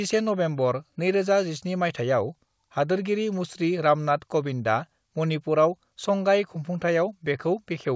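No faults can be heard anywhere in this speech.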